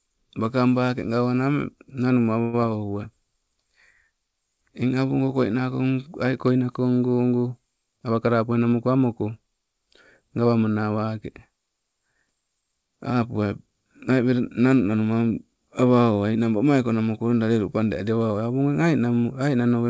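At 2.42 s the speech stalls for about 0.11 s, the last sound stretched into a fading buzz or hiss before the talker resumes exactly where they stopped, with nothing skipped. This is a call audio freeze, likely from packets held up in transit so the jitter buffer briefly ran dry and the receiver extended the final sound until audio arrived.

Just after, from 2.61 to 2.64 s, a quick smear or wobble passes over the speech. This is short concealed packet loss: about 40 ms of audio never reached the decoder in time, and the receiver patched the hole by continuing the preceding sound and blending back into the real signal.

From 8.00 to 9.03 s the speech runs hurried, about 110% of normal speed, while its pitch stays the same. This is a jitter buffer speed-up: with excess audio queued, the receiver trimmed short pitch-period slices repeatedly, removing roughly a tenth of a second to cut delay. 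Throughout, the call path's G.722 coding at 64 kbps leaves nothing above 8 kHz.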